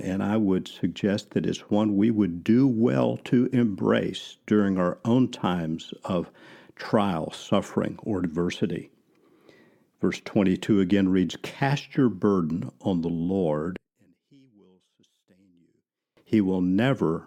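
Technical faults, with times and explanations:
13.77–16.17 s, one channel inverted: the speech abruptly falls by about 35 dB to a faint residue, then returns at full level. This is likely one stereo channel with reversed polarity. The speech common to both sides cancels when they are summed to mono, leaving only their small difference. On the waveform the envelope shrinks to a near-flat band. The spectrogram shows the whole span dimmed.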